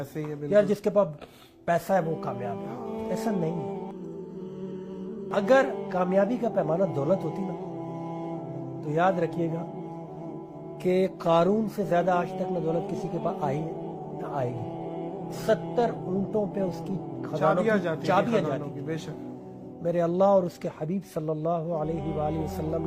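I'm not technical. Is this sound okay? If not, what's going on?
No. From 3.91 to 5.31 s there is channel delay, causing comb filtering. One side arrives less than a millisecond late. When the two sides are mixed together, some pitches cancel out, starting around 700 Hz. The sound turns hollow and phasey.

From 11.05 to 17.05 s the audio switches to a lower-bitrate version of an adaptive stream. This likely happened because the connection slowed. Compression artefacts become more noticeable. The change is abrupt but there is no gap.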